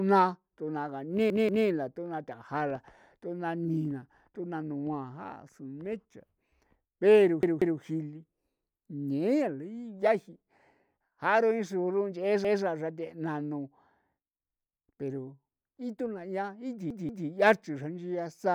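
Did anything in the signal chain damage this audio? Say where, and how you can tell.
Yes, at the driver or buffer stage, where a repeated buffer fault occurs four times. A chunk of speech about 186 ms long replays with a hard join at each repeat. It plays twice more at 1.30–1.67 s (just before "la thuna"), 7.43–7.80 s and 16.90–17.28 s, and once more at 12.45–12.63 s. Fresh audio missed its deadline, so the device replayed its last block. The chunk length fits an 8192-sample buffer. Nothing seems dropped; the repeats only delay what follows.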